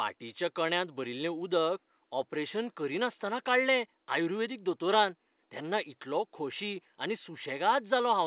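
Nothing goes wrong anywhere in this speech recording, which sits over a faint bed of room noise about 46 dB below the talking and has the narrow, nothing-above-4-kHz sound of a phone-quality call path, which fits a G.711 mu-law link.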